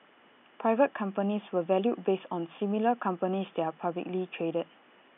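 No technical faults can be heard anywhere in the recording. The room's own background noise sits about 33 dB below the speech, as part of the captured sound rather than anything the system added.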